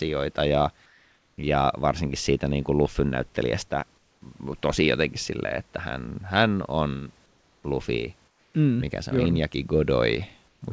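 Comfort noise in place of the background affects this speech clip in five pauses: 0.86 to 1.38 s (before "ja varsinkin siitä niin"), 3.98 to 4.22 s (before "tosi jotenkin silleen että"), 7.26 to 7.64 s (after "hän on"), 8.28 to 8.54 s and 10.48 to 10.62 s. In each gap the room's real background gives way to a flat, featureless hiss about 2 to 6 dB quieter. The likely cause is discontinuous transmission: the sender stops sending audio while there is no speech, and the receiver synthesises noise to fill the silence.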